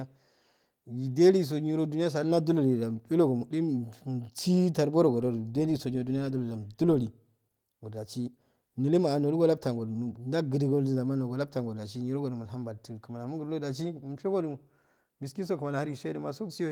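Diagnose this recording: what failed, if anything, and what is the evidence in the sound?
Nothing failed; no stage in the chain shows trouble.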